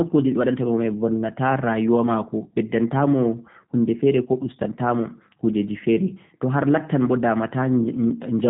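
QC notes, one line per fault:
throughout, G.729 codec: the speech has that squeezed, slightly rough VoIP sound, and the damage is plainly audible. Nothing gets through above 4 kHz, so it comes across dull and boxy. Instead of keeping the actual waveform, the codec rebuilds each 10 ms stretch from a filter shape, a pitch estimate and a few pulses, which gives it that synthetic edge. The thin, low-rate character fits an 8 kbit/s G.729A stream.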